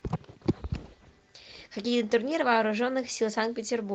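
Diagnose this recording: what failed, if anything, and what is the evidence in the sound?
The speech comes through with its full audio band intact and only the light coding texture of Opus voice compression working normally in its hybrid mode, and nothing in the signal shows a failure at any stage.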